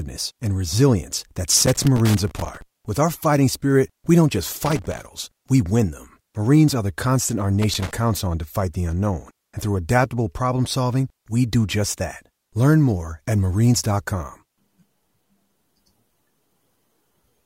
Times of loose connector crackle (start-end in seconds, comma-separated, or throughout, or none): 1.57-2.62, 4.66-5.05, 7.62-7.91